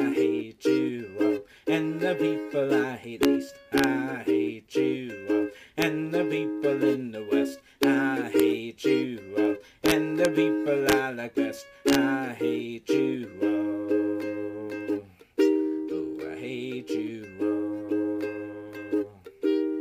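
Integer overflow cracks hit at 3.23, 3.78 to 3.84, 5.82, 7.83, 8.40, 9.86 to 10.25, 10.89 to 10.93 and 11.89 to 11.95 s. Peaks going only about 0 to 3 dB over full scale wrap to the opposite sign instead of limiting, so you get harsh cracks, much nastier than clipping.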